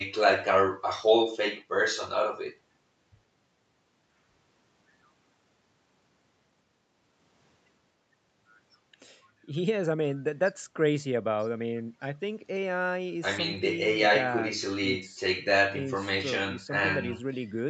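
There are no technical faults to describe in time order anywhere in the speech.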